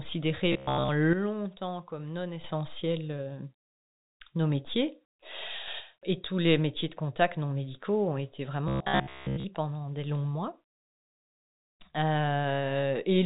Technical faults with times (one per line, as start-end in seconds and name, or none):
0.52-0.88 robotic sound from repeated short buffers
1.13-2.44 sudden gain jump
5.68-5.80 sudden gain jump
8.68-9.45 robotic sound from repeated short buffers